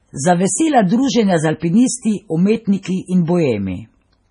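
MP3 compression damage runs through the whole clip. Nothing is audible above 10.5 kHz, and the speech has a heavily watery, swirling quality. That points to a starved encoder, likely MP3 at a very low rate, which fits roughly 24 kbps. Short of bits, it cuts the treble at a fixed point and drops weaker frequency lines, which flicker on and off between frames. The result is chirpy, metallic s sounds and smeared consonant attacks.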